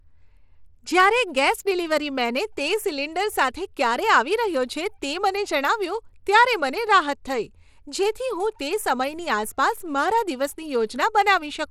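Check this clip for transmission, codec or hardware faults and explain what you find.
The speech carries a codec fault throughout. It is most likely Bluetooth SBC compression at a small bit pool, which fits a bitrate near 96 kbps. Its simple bit allocation starves the upper bands of bits, so the treble flickers, a gritty noise clings to the speech, and nothing remains above 17.3 kHz.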